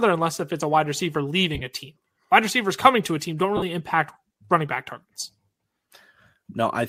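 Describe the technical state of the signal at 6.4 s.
At 6.4 s the speech is intact, with nothing beyond the light lossy compression heard throughout.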